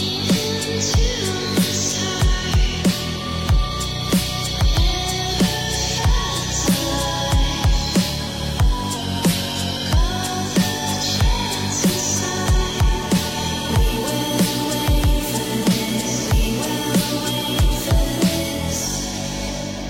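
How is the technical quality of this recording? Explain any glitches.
One glitch stands out. From 8.96 to 9.97 s, a drift correction step likely slowed playback about 5.4% to rebalance a buffer, dropping pitch roughly a semitone before snapping back.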